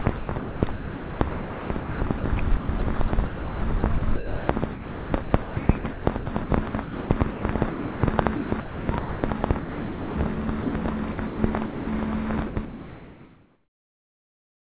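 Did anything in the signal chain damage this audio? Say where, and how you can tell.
Yes. The damage happened at the sender's call-processing stage, at the voice detector, and it shows up as two related faults.

Sound chopped by the voice detector appears at 0.02–2.24 s, 2.57–7.43 s, 8.36–10.73 s and 11.12–11.39 s. Within these spans, roughly 1.5 s, 2.4 s, 1.4 s and 0.18 s of the real sound are replaced by comfort noise. This is likely the detector repeatedly gating quieter parts of the sound. Packet loss would instead leave clicks or warbly concealment.

Sound dropped by the voice detector occurs at 7.70–8.03 s, 11.66–11.87 s and 12.47–12.56 s. Each is a single clean hole, about 0.33 s, 0.21 s and 0.09 s long, filled with steady comfort noise before the sound returns. This likely comes from the detector treating the sound as background and stopping transmission. A buffer underrun would leave dead silence or a repeated fragment, and the narrowband G.711 path, with nothing above 4 kHz, is working normally.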